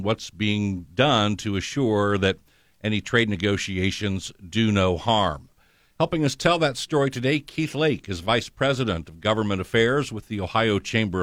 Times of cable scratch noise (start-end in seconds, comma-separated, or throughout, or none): none